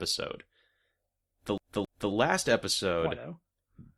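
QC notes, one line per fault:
1.58–2.12 s, CD stuck on one turn: the same 0.27 s of speech plays twice in a row, each pass cut off by a brief mute, as the laser jumps back to the same scratched point on successive revolutions, giving a quick, evenly timed stutter.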